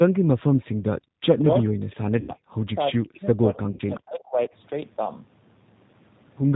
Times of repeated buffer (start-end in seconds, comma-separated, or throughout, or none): none